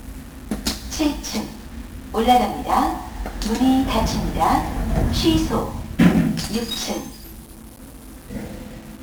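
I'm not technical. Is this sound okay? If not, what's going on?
No. From start to finish the clip suffers from 1-bit DFPWM compression, which stores each moment of sound as a single up-or-down step. That crude rounding adds heavy fuzz and crackle everywhere and buries the high, crisp detail in hiss.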